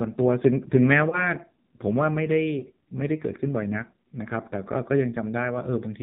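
A speech recording carried throughout by the AMR narrowband mobile codec, heavily degraded. Nothing above 4 kHz survives, so the voice sounds muffled and telephone-thin, and the sparse pulse excitation gives it a pronounced buzzy, synthetic edge. That degree of damage fits one of the lowest AMR-NB modes, around 5.9 kbps, where too few bits remain for the vocal tract model to follow the voice closely. Lost AMR speech frames cause two brief disturbances. The first runs from about 1.1 to 1.34 s. The second runs from about 2.6 to 2.64 s. Each sounds like a short dip or warble, consistent with a single 20 ms frame failing its checksum. The decoder fills the gap by repeating the last good pitch and vocal tract settings at reduced gain, and the voice comes back weak or rough for a moment before settling.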